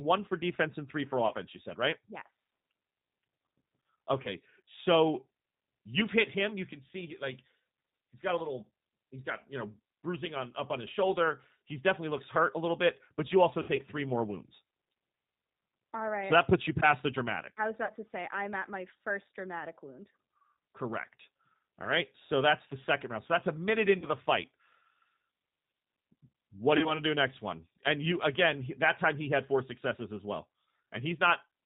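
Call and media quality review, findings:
G.729 codec, whole call: band-limited below 4 kHz, rough and synthetic texture, consistent with 8 kbit/s CELP coding that rebuilds speech from a filter, pitch predictor and few pulses.

VoIP packet loss concealed by the speech codec at 1.27, 4.23 (before "so you've hit him"), 13.62–13.82 (between "bit but you also" and "three more wounds"), 17.85 (between "the dramatic I was" and "to say I'm at"), 23.98 and 26.77–27.01 s. Decoder extrapolates the last frame into a fading buzz or noise; weak, distorted onset persists briefly after recovery.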